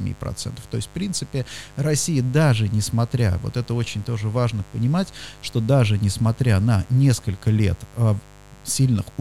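From the first moment to the last, there's a mains buzz sitting under the speech, locked to a 50 Hz supply. Something like a dimmer, a rectifier or a poorly shielded cable is letting sharp switching spikes through twice per mains cycle, so the harmonics stack up well into the kilohertz range. That's why it comes across as a steady, raspy buzz rather than a smooth hum, roughly 25 dB below the speech and never letting up.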